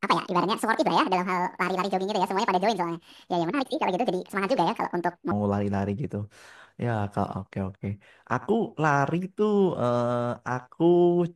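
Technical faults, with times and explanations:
0 to 5.31 s, section at the wrong speed: The speech runs at 1.71 times its natural rate. Pitch rises with it, by roughly ten semitones, so the voice sounds high, thin and rushed. Speed and pitch are locked together here, which points to a change in playback rate rather than a pitch effect. The likely cause is this stretch being played or resampled against the wrong clock. At 5.31 s the sound drops back to normal speed and pitch.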